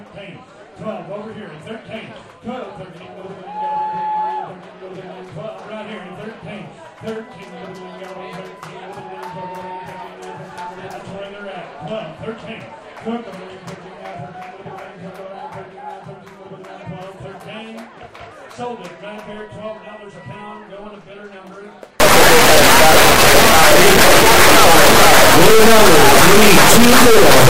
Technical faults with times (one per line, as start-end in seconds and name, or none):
22.00-27.49 integer read as float